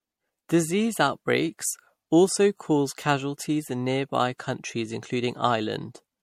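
From start to finish the speech has a swirly, hollow smear to it, with consonant attacks blurred soft and nothing at all above 16.5 kHz. That's more mush than one pass at this rate should give, so it's likely generation loss: MP3 around 70 kbit/s, re-encoded about four times. Each pass quantises on a fresh frame grid, so the noise and spectral holes keep stacking instead of staying put.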